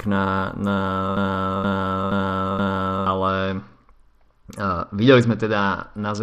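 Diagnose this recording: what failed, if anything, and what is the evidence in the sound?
A broken-record loop runs from 1.17 to 3.06 s. A 0.47 s fragment repeats exactly, four times back to back, and the audio that belonged in that span is lost. The likely cause is a stalled player or stream buffer that kept replaying the last fragment it held.

A Bluetooth SBC bit pool drop starts at 3.28 s and lasts to the end. The treble dulls and a gritty noise rises, which fits the phone cutting the SBC bit pool from 31 to 9, near 72 kbps. The top sub-bands are starved and the rest coarsely quantised at the codec stage.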